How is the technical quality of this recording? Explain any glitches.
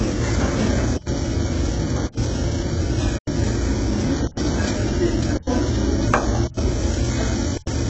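The technical quality is poor: heavy low-bitrate coding affects the whole recording, and regular dropouts break it into pieces.

HE-AAC compression, throughout: the top end stops dead at about 7.9 kHz, and what treble remains sounds synthetic, with a gritty, metallic edge on bright transients and hiss-like content. That fits a very low bitrate around 8 kbps, with the likely cause being HE-AAC, where only the lower band is truly coded and the upper band is rebuilt by copying lower partials upward under a coarse envelope, so its detail no longer matches the original.

Gap between chunks, at 0.97, 2.07, 3.17, 4.27, 5.37, 6.47 and 7.57 s: each is a 100 ms hole of silence with abrupt edges, and they recur every 1.1 s like a steady stutter. The pattern points to the audio being delivered in 1-second chunks with a pause inserted at every join, from padding or late chunk starts. Nothing is missing from the chunks themselves, but the flow is cut each time.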